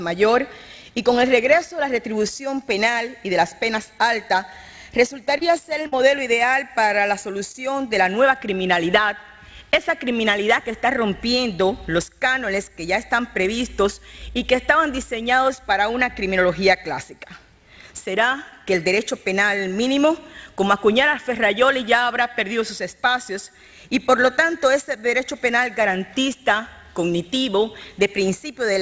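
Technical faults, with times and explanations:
5.38–5.43 s, 5.83–5.87 s and 7.52–7.56 s, short concealed packet loss: each time about 20 ms of audio arrived too late to decode. The receiver filled the hole by extending the preceding sound for 16 to 31 ms and then blending back, so each spot is a brief smear or wobble.
5.87–5.94 s, burst of packet loss: directly after the second short loss, about 60 ms in a row went missing. Concealment held the last sound for about 52 ms while turning it down, so the gap is a fading buzz or hiss, and the audio resumes slightly further on with that stretch gone.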